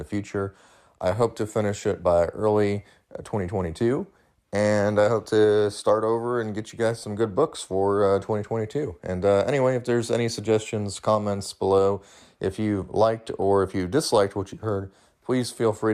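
No technical faults can be heard anywhere in the speech recording, and the signal stays steady and intact throughout.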